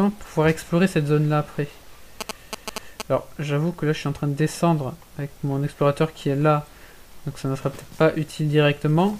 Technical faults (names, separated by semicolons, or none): GSM signalling bursts